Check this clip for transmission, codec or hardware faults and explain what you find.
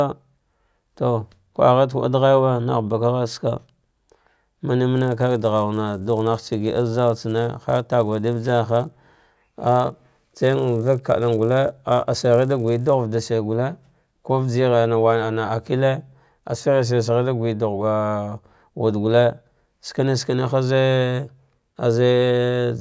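One fault is present: a resampler restarted on every block, from 4.95 s to 12.95 s. The rate converter processed each 10 ms block in isolation, without the neighbouring samples its filter needed at the block edges, so every boundary carries a small discontinuity. The sound fits a 24 kHz to 16 kHz conversion. At 100 edges per second, the errors merge into a steady 100 Hz buzz riding on the speech. It appears only while there is signal.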